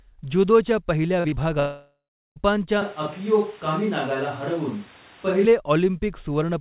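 Just after "ज्युदोच्या पहिल्या", two short concealed packet losses hit at 1.20 to 1.27 s and 1.28 to 1.35 s. About 40 ms of audio arrived too late each time, and the receiver patched the gaps by extending the preceding sound, leaving two quick smeared wobbles in close succession.

From 1.60 to 2.39 s the sound stretches into a fading buzz and then goes silent for roughly the last 0.37 s, resuming later with about 0.76 s lost. A long network dropout, where incoming audio likely stopped entirely, fits this pattern.

Between 2.82 and 5.45 s the audio turns abruptly roomy and hollow, drops about 5 dB, and carries noticeable background noise well below the voice. This matches a switch to a distant microphone, the close one having likely failed, with an equally sudden return. Throughout, nothing above 4 kHz passes the narrowband call codec.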